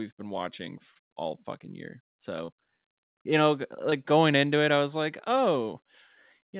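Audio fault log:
0.94–0.97 s, 2.45–2.50 s, 3.90–3.94 s: short concealed packet loss. About 20 ms of audio failed to arrive in time at each point: between "been watching" and "all fucking year", just after "watching all fucking year", and between "you know" and "going into it I". The receiver patched each gap by extending the preceding sound for roughly 13 to 24 ms before crossfading back, which produces a brief smear or wobble in speech that is already band-limited to 4 kHz by the narrowband call codec, consistent with G.711 mu-law.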